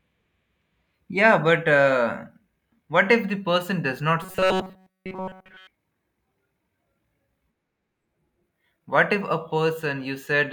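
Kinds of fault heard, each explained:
Robotic sound from repeated short buffers: from 4.23 to 5.67 s the speech collapses into a rigid, metallic buzz at 188 Hz that only loosely follows the words. The likely cause is audio arriving too slowly, so playback keeps looping the most recent fragment instead of new material. A fixed 188 Hz tone points to a repeated segment of about 5.3 ms, and essentially all of this stretch sounds looped rather than fresh.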